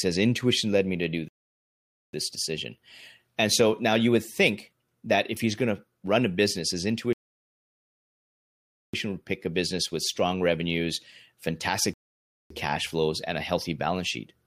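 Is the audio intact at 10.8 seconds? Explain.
Yes, the speech at 10.8 seconds is intact, with no audible fault at that moment.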